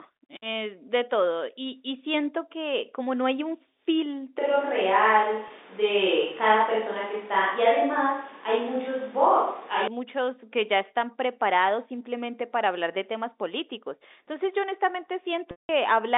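At 4.39 s the sound turns roomy and hollow. The bass thins out. The level stays about the same, but room noise rises to roughly 25 dB under the speech. This is likely a switch to a distant microphone, with the close microphone's signal dropped. The change is abrupt at both ends. The close sound returns just as suddenly at 9.88 s.

Inside that stretch, from 5.48 to 5.50 s, there is packet loss with pitch repetition. About 20 ms of audio is missing, which fits two 10 ms packets. The receiver fills the gap by repeating the last pitch period. It is heard as a brief held, buzzy tone.

A longer loss runs from 15.51 to 15.69 s, about 180 ms. The repeated pitch period fades out over about 50 ms. Silence follows, and the sound returns through a short cross-fade. Both gaps sit inside G.711 telephone coding, which limits the band to about 250 Hz to 3.7 kHz.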